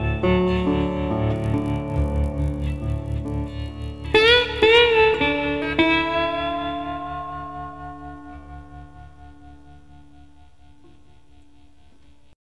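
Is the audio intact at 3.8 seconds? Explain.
No. From 1.36 to 4.64 s the resampler restarted on every block, converting 48 to 24 kHz in 20 ms blocks with broken edges, giving a 50 Hz buzz.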